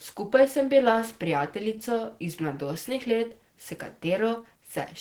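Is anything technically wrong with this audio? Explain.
Yes, the whole clip carries Opus compression damage, and it's plainly audible from start to finish. The speech comes across muffled and a bit hoarse, with a grainy, rough edge where the encoder ran short of bits and filled the upper bands with folded or noise-like content instead of real detail. That hoarse quality is typical of the hybrid mode, and it fits a low bitrate somewhere around 16 kbps, likely the cause here.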